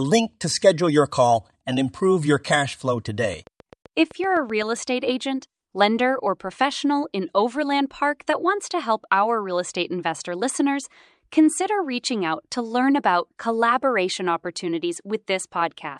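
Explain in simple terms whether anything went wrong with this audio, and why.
Right after "improve your cash flow", from 3.20 to 4.63 s, there's a train of clicks: about ten evenly spaced ticks, nearly eight a second, roughly as loud as the speech, stopping before "estate agent lender or". The likely culprit is interference or a faulty connection or power supply.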